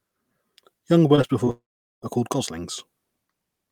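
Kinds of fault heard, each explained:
Repeated packet loss (robotic sound): from 1.15 to 1.49 s, four brief holes of 20 ms or less are patched, giving choppy, robotic sound rather than one sustained gap.
Long network dropout: from 1.51 to 2.04 s the sound stretches into a fading buzz, then about 0.42 s of silence, most likely from half a second of lost audio.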